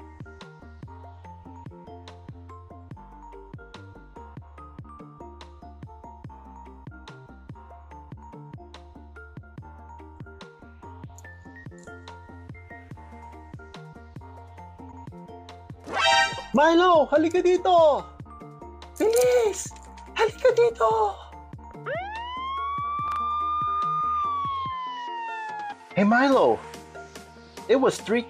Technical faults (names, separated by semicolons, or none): repeated frames; chunks out of order